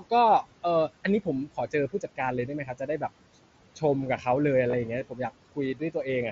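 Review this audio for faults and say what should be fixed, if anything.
Noise suppressor artifacts run through the whole recording. The suppressor pulls the room noise down by about 18 dB between phrases and lets it rise again under speech, so the leftover noise pumps. To prevent it, reduce the suppression depth and smooth the gain changes more slowly.

Speech cut by the noise suppressor occurs at 1.46–1.74 s, 1.92–2.19 s, 2.47–3.03 s and 5.74–6.06 s. The suppressor treats quieter parts of the speech as noise and turns them down by about 13 to 18 dB at the deepest, so roughly a tenth to a fifth of a second in each stretch sounds swallowed. To prevent it, raise the speech-presence sensitivity so soft speech is protected from gain reduction.

Concealed Bluetooth headset packet loss occurs at 4.71–4.73 s. The mSBC headset link drops a short burst, which fits about three lost frames, and the receiver fills the gap by repeating the last stretch of waveform. 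It comes through as a brief buzzy hold with a slight warble where real sound resumes. To prevent it, keep the headset close to the phone and away from radio interference.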